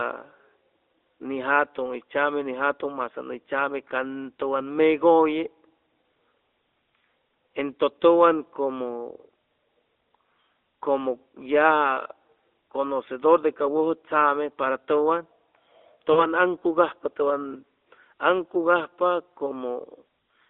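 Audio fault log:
16.12–16.27 s, lost AMR speech frames: about 40 ms of speech went missing, consistent with two 20 ms frames. The decoder reused the last pitch and vocal tract settings with falling gain, so the sound smears and fades instead of leaving a hard silent gap or click.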